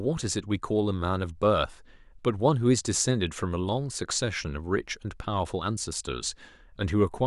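A speech recording with nothing technically wrong with it.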